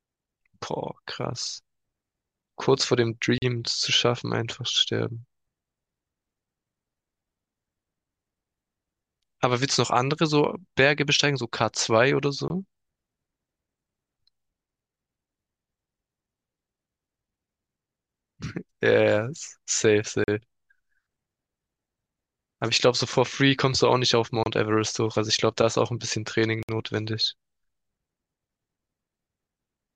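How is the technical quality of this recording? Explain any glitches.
The recording has five dropouts. Blocks of digital silence occur at 3.38–3.42 s, 12.48–12.50 s, 20.24–20.28 s, 24.43–24.46 s and 26.63–26.69 s, lasting 40, 20, 40, 27 and 60 ms. Each time, the output buffer likely went unfilled and the samples became zeros. The speech cuts out abruptly, heard as a tick or a brief hole.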